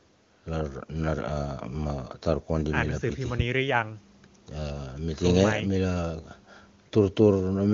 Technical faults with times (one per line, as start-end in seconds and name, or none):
none